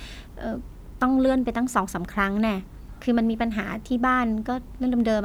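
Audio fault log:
No fault is heard in this speech clip.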